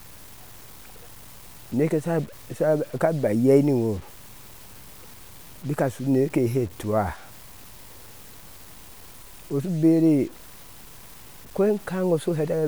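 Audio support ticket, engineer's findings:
Grainy, gritty distortion on speech, whole clip; worst on quiet tails, which sputter or drop to silence. Likely low bit depth without dither, fits 7-bit truncation; error about 25 dB under signal. Unlike hiss, tracks the voice and vanishes in gaps.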